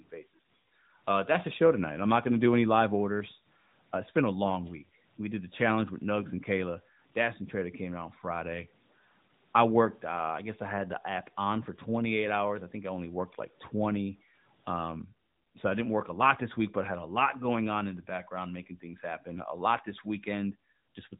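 From 0.00 to 14.84 s the samples were likely truncated to a short word length without dither, which fits 10 bits. This low bit depth without dither leaves grainy error roughly 35 dB below the speech, so quiet syllables and decays turn gritty within the narrowband phone-style band.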